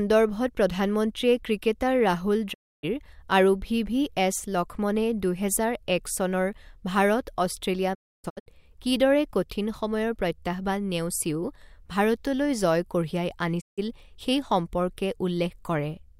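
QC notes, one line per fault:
2.52–2.85 s, digital broadcast dropout: the speech fades out over about 20 ms and the gap lasts roughly 290 ms before frames decode again. The length fits about nine lost frames, muted after failing their checks. The waveform goes flat, and the spectrogram shows a clean vertical blank across all frequencies.
7.93–8.48 s, digital broadcast dropout: the speech breaks into several short holes spread over about 510 ms. Together they remove about 420 ms of audio, and the longest single silence is about 290 ms. This pattern points to intermittent frame failures, with good frames briefly getting through between them. The waveform shows flat segments separated by short slivers of signal, and the spectrogram shows a comb of blank columns.
13.60–13.80 s, digital broadcast dropout: the speech fades over about 20 ms into a 160 ms silence. This fits roughly five lost frames, muted by the receiver. 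The waveform shows a short flat gap with tapered edges, and the spectrogram shows a narrow full-band blank column.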